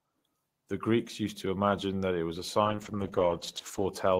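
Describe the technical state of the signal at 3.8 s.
At 3.8 s the speech sounds coarse and watery, with the upper frequencies dulled. The cause is a call bitrate drop that begins at 2.67 s, just after "that it was a", and lasts until 3.97 s. The sound suggests the encoder was told to fall from about 32 kbps to roughly 10 kbps, staying at that floor for about 1.2 s. At that rate it quantises more crudely and trims the top of the spectrum.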